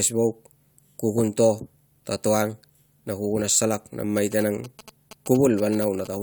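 From 4.17 to 6.07 s, GSM signalling bursts from a nearby 2G phone are rectified by the audio circuit, producing a galloping dit-dit-dit of short 217 Hz buzzes roughly 20 dB below the speech.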